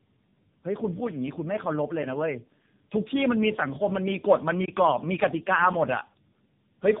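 Speech with tandem speech coding throughout: rough, muffled, warbly, nothing above 3.7 kHz, consistent with repeated decode/re-encode across three narrowband speech codecs, ending in AMR-NB.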